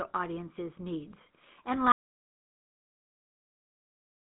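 Speech passed through the GSM full-rate codec for the whole clip. It has a buzzy, gravelly roughness from the pulse-driven excitation, which mere band-limiting wouldn't add, and there is nothing above 3.9 kHz, consistent with a 13 kbps phone channel. At 1.92 s an audio dropout to silence begins and runs to the end: dead silence with no room tone, unlike a fade or noise gate, likely caused by a lost input link.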